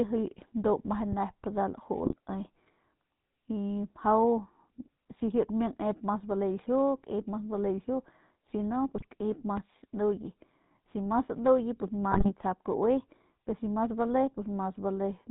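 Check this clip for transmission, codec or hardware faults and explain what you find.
There are three things going on here: GSM full-rate coding across the whole clip, one loud pop near the start, and three short bursts of GSM bit errors.

The GSM full-rate codec is on the speech from start to finish, and the damage is plainly audible. The buzzy, gravelly texture and the cut-off above 4 kHz fit the 13 kbps full-rate coder. That coder rebuilds the voice from a vocal-tract filter fed by a sparse, evenly spaced pulse train, so only a thinned-out excitation survives. You get that rough, slightly mechanical grain over everything, and the top end sounds dull.

There's a loud pop from 1.12 to 1.15 s. It's a single sharp click sitting a few dB above the speech, and the talking carries straight on underneath it. The likely cause is a voltage spike from a connector, a switch, static or a driver hiccup getting into the chain, with the downstream circuitry smearing it into a quick pop.

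GSM bit errors show up three times: 2.04 to 2.15 s, 8.95 to 9.05 s, and 12.12 to 12.31 s. Each burst spans a handful of 20 ms frames, around five in the first two and closer to eight in the last. Flipped bits reaching the decoder scramble the filter, pitch and gain parameters for those frames. The result is brief squawks, gargling and level jumps where the voice suddenly warps before snapping back.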